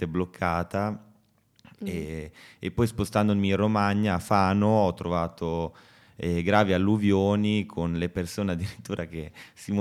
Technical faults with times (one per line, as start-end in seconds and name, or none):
none